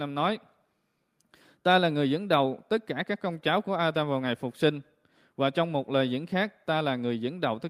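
Nothing technical stands out in this short speech recording; there's no fault to point to anywhere along it.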